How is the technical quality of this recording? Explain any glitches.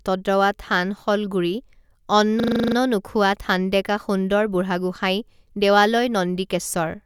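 One glitch stands out: a system hang loop from 2.4 to 2.76 s, where a 40 ms piece repeats nine times, buzzing at 25 Hz. The waveform shows identical repeated blocks, the spectrogram evenly spaced vertical stripes.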